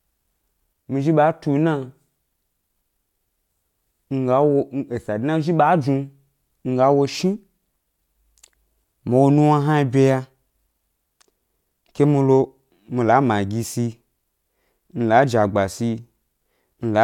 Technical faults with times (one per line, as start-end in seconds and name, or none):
none